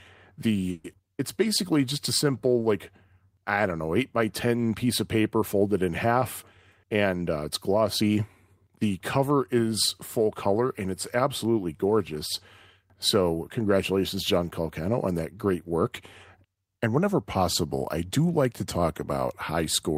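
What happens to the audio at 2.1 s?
Around 2.1 s the speech slows slightly without any change in pitch: sounds are drawn out from 1.44 s to 2.54 s, as playback runs at about 95% speed. This is a jitter buffer slow-down. The receiver's buffer was short of reserve, so it stretched the audio by repeating individual pitch periods and pieces of pauses in succession, adding 66 ms in total over that stretch.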